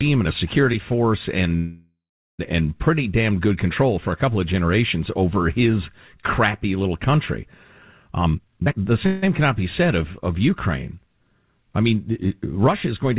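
At 1.56 s the sound stops moving and a fading buzz carries on until 2.41 s. The last 0.4 s of it falls to silence. This call audio freeze likely came from packets stalling and the jitter buffer running dry. Nothing is lost. The sound resumes where it stopped, about 0.83 s late.

From 8.11 to 8.92 s the speech rushes at about 175% speed with unchanged pitch. This is a jitter buffer speed-up. The receiver trimmed pitch-period slices to shed the built-up delay, cutting roughly 0.7 s.

A second, brief freeze follows from 9.07 to 9.24 s. It is 0.16 s of trailing buzz with no silence.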